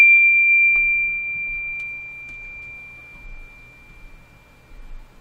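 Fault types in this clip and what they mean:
No faults detected in this music.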